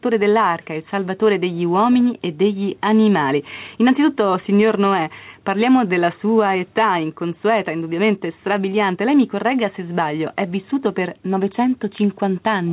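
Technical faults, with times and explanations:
Throughout: gain pumping. The level keeps breathing by around 5 dB. Loud and soft passages sit squashed close together. The likely cause is input gain set far too high, with a fast limiter or compressor clamping down on each peak. On the waveform the envelope looks flattened, with quiet stretches swelling upward. On a spectrogram, nothing shows above the 4 kHz ceiling of the telephone-band call codec.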